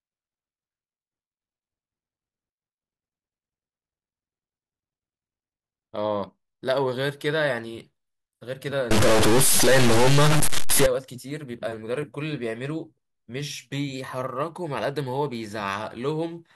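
From 8.91 to 10.86 s the speech turns harsh and buzzy, with a gritty distortion, and the gaps between sounds fill with a hiss-like noise instead of falling silent. This is most likely a stuck bit, where one data bit is held at a fixed value. Roughly half the samples are pushed off by a step of about -15 dBFS, enough to be clearly audible even in the pauses.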